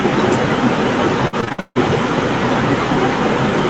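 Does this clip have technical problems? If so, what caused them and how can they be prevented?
Yes, three kinds of problem show up in this speech clip.

The first is echo with no canceller, and it runs the whole way through. The speech is shadowed by a quieter, thinner copy arriving roughly a third of a second later, at about 14 dB below the direct speech. The far end was playing the call out of a loudspeaker, its mic caught that playback, and nothing subtracted it before sending it back across the network. To prevent it, make sure acoustic echo cancellation is enabled and working on the far-end device, or have that person use a headset.

Next come two sharp, isolated clicks at 0.51 s and 2.94 s. Each one is a thin vertical line across the spectrum with no audible gap. That pattern is most likely dropped samples: just a handful went missing, a tiny fraction of a millisecond, so the waveform jumps straight to a later value and makes a step. 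To prevent it, give the audio capture and processing thread enough headroom and buffer size that it never misses a deadline.

The third is repeated packet loss (robotic sound) from 1.27 s to 1.77 s. Over that half second there are six gaps, the longest about 152 ms, and roughly two-thirds of the stretch is concealed. Each hole gets patched by stretching out the last bit of sound, then the next hole hits, so it comes out choppy with pieces missing. To prevent it, fix the network path with a steadier connection, less congestion, and forward error correction turned on.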